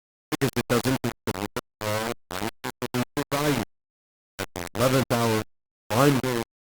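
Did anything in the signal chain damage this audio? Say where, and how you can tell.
Yes. The speech is coarse and grainy from start to finish, the distortion nearly as loud as the speech itself and shifting with every syllable, while quiet moments sputter or collapse to silence. This is low bit depth without dither, likely from a sample-format conversion rounding to just 3 bits.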